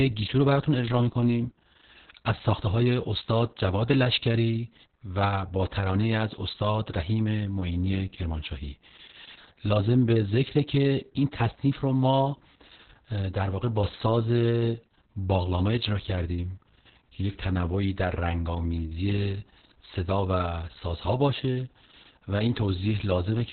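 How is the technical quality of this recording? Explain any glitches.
Quality is poor because of one fault that runs through the whole clip. It is Opus voice compression: the codec's SILK speech coder worked in narrowband mode and coded the excitation coarsely, which fits a bitrate near 6 kbps. Nothing survives above 4.4 kHz, so the speech sounds muffled, hoarse and faintly robotic throughout.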